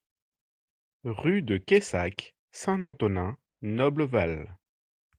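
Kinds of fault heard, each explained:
Burst of packet loss: Several packets in a row failed to arrive in time, so about 140 ms of the speech is gone, from 2.79 to 2.95 s. The receiver filled the hole by carrying on the last sound it had and turning it down. That fill lasts about 140 ms and fades to roughly 60 ms of silence. The speech then picks up further along, with the missing stretch skipped over.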